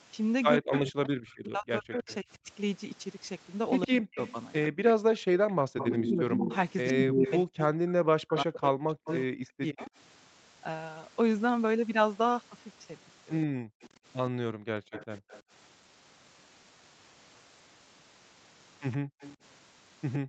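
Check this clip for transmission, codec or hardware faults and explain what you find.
Three echo-canceller faults appear on a call path that carries nothing above 8 kHz.

Speech suppressed in double talk, from 0.58 to 9.91 s (about 4 s in total) and from 14.63 to 15.01 s: the canceller, likely confused by both sides talking at once, pulls the talker down by up to around 40 dB.

Echo leak, from 0.72 to 9.87 s, 13.42 to 15.42 s, and 18.91 s to the end: the canceller likely left residual loudspeaker pickup, heard as a copy 111 ms late. It is roughly 5 dB below the speech early on, then about 20 dB and about 15 dB below.

Background gated by the echo canceller, from 5.53 to 5.61 s, 13.47 to 13.82 s, and 18.98 s to the end: the canceller clamps the microphone, and room sound drops by about 40 dB.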